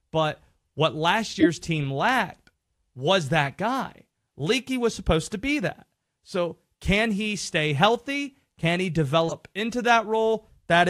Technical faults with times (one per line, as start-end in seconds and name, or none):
1.40-1.46 corrupt frame decoded
3.45-3.49 corrupt frame decoded
5.22-5.25 corrupt frame decoded
9.27-9.32 corrupt frame decoded